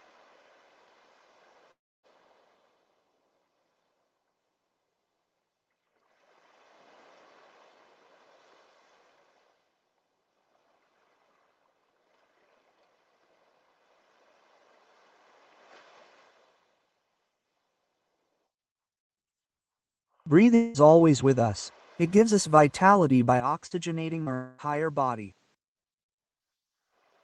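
Audio carried over a call path whose coding noise and top end near 8 kHz point to Opus at about 24 kbps. Three long network dropouts are the likely cause of three gaps. From 1.71 to 2.06 s about 0.32 s never arrives, and a fading continuation gives way to near-silence. From 20.55 to 20.77 s and 24.34 to 24.61 s, about 0.2 s and 0.24 s are covered by a decaying buzz or hiss before the sound resumes past the lost part. From 23.4 to 25.55 s the input was likely switched to a poorer device: the sound turns duller with nothing above 8.5 kHz, drops roughly 10 dB in level and gains a faint noise floor. Inside that stretch, short concealed packet loss at 23.66 to 23.74 s and 24.23 to 24.29 s fills about 40 ms each with extrapolated sound, heard as brief smears.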